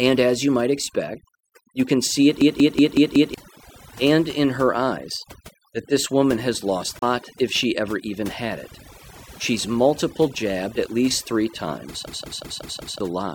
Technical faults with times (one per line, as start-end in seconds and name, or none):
0.00-13.35 overdone noise removal
2.41-3.34 system hang loop
6.99-7.03 damaged data in a compressed stream
12.07-13.00 system hang loop